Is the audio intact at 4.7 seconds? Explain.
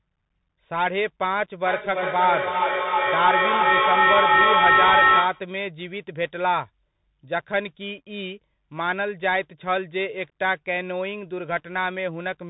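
No. From 1.66 to 5.53 s there's feedback echo between two devices: a second device replays the sound, its microphone catches it again, and repeats arrive roughly every third of a second, peaking about 6 dB above the speech. Throughout, the Bluetooth CVSD headset codec cuts everything above 3.8 kHz, leaving scratchy, granular, band-limited audio with a hiss underneath.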